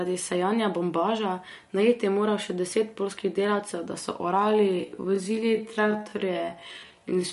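Throughout, the speech has a swirly, watery texture and nothing above 11.2 kHz, likely from MP3 compression at a low bitrate, consistent with about 48 kbps. From 4.33 s to the end, a likely time-stretched section slows the pace to about 0.6 times while the pitch holds, leaving the speech dragging.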